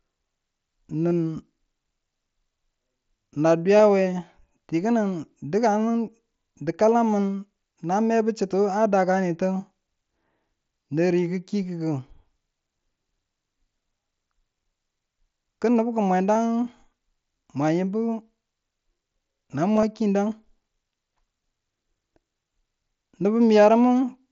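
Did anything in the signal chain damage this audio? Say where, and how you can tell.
Yes: concealed Bluetooth headset packet loss on the wireless link, at 1.11 s, 3.77 to 3.79 s, 16.35 s and 19.77 to 19.83 s. Unlike a dropout's silent gap, each loss is filled by repeating recent waveform, giving brief buzzy held fragments. The last event is scattered over about 60 ms.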